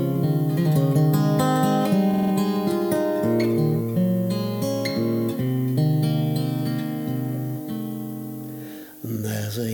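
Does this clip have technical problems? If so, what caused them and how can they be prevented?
Yes. Repeated buffer at 2.14 to 2.32 s: new audio arrived late, so one 46 ms piece played four extra times with hard joins, which fits a 2048-sample buffer. To prevent it, give the playback path more buffering headroom so fresh audio always reaches the device before it runs dry.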